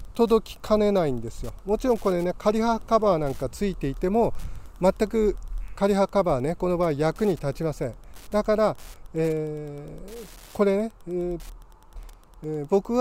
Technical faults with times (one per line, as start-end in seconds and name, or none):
0.00-13.01 Wi-Fi interference